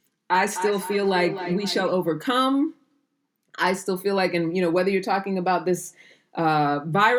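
From 0.55 to 1.92 s there's a feedback echo between two devices: a second device in the room replays the speech, this mic catches it, and its echo canceller can't touch it. The speech comes back roughly every 300 ms, peaking about 9 dB below the original.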